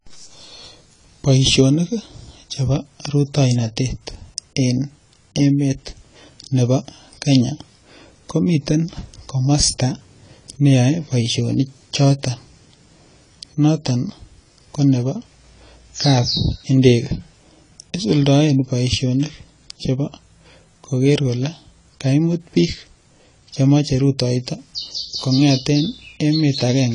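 From start to finish the speech is band-limited, with nothing above 10 kHz, and it sounds dull and smeared, with a warbling, fizzy texture on sustained sounds and sibilants. The likely cause is AAC compression at a low bitrate, consistent with AAC-LC around 24 kbps. There the encoder runs short of bits, lowers its cut-off and quantises the remaining spectrum coarsely against its hearing model, leaving gaps that come across as that swirling texture.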